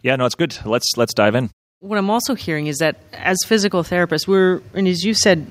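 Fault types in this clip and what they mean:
automatic gain rising: from 0.05 to 5.46 s the gain control lifts a too-quiet input by about 11 dB, so speech and background swell together steadily.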